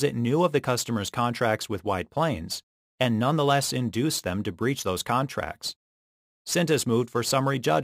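Crude rate conversion runs through the whole sound, from start to finish. The sample rate was raised without any anti-imaging filter, simply by repeating the nearest existing sample, and the pattern of repeats fits a step from 44.1 kHz to 48 kHz. That stepped error sits about 25 dB below the signal and forms tones unrelated to the material, heard as a gritty, inharmonic fizz that rides on the louder and brighter passages.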